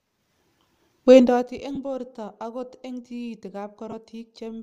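A speech clip in which, from 1.18 to 1.58 s, a fine buzzy ticking rides on the sound while the level drops by roughly 20 dB. That is zipper noise: the gain was lowered in discrete jumps, around 200 a second, with no smoothing between them, so each jump puts a tiny click into the waveform and the clicks fuse into a zipping texture. Two brief dropouts follow, at 1.75 s and from 3.91 to 3.94 s, each a short noisy smear of about 15 ms where the sound loses its clear pitch before it snaps back. These are lost LE Audio frames. The decoder covered the gap by repeating the last spectrum with randomised signs, and 15 ms fits two frames of 7.5 ms. The light breathy grain around them is likely from LC3 compression.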